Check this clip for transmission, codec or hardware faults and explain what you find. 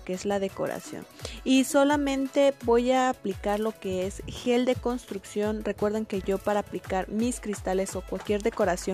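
Two transmission faults of the same kind turn up.

Chunks out of order at 4.44–4.46 s and 6.21–6.25 s: a 10 ms block arrived late and played after the blocks meant to follow it, one chunk late first, three later. Nothing is lost, but three hard joins give a brief jumbled moment, longer at 6.21 s.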